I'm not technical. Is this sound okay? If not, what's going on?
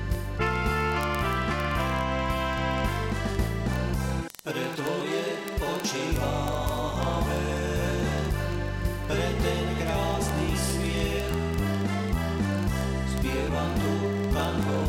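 No. From 0.1 s right to the end at 14.88 s there's a fast, steady ticking, about fifty clicks every second, hundreds in all. These are word clock ticks. The sound was passed digitally between two devices that each keep their own timing, and their clocks run roughly a tenth of a percent apart. Each time they slip out of step, a single sample is lost or doubled, and that makes one tick.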